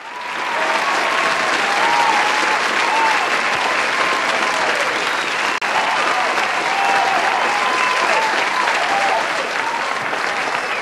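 At 5.58 to 5.62 s there is a digital broadcast dropout: the receiver stopped getting decodable data, or a frame failed its checksum, so it muted its output rather than play corrupt audio. The sound fades out over about 3 ms and leaves a hole of roughly 32 ms, which fits a single lost frame, before the programme returns. Whatever was broadcast in that gap is gone, heard as a brief, clean break.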